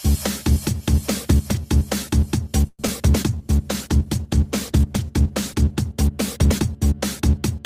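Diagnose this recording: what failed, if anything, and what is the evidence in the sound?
Call audio freeze at 2.67–2.80 s: the last sound stretches about 114 ms into a fading buzz, briefly silent, then resumes intact. Likely network delay emptying the jitter buffer.

Short concealed packet loss at 2.82–2.84 s and 2.87 s: brief smears where about 40 ms and 10 ms never arrived, synthesised by the decoder as the buffer caught up.

Call bitrate drop from 3.26 to 7.59 s: the codec fell from 64 to 16 kbps, bottoming for about 2.5 s, so the sound turns coarse and muffled.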